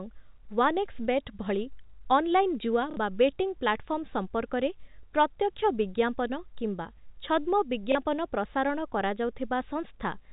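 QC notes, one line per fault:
2.91–2.97 s, packet loss with last packet repeated: 60 ms of audio went missing and the previous packet was replayed, giving a robotic stutter just before "ବା ବେଟିଂ".
7.92–7.95 s, packet loss with last packet repeated: a 30 ms gap was filled by repeating the last packet, pointing to 30 ms packets on this telephone-band link.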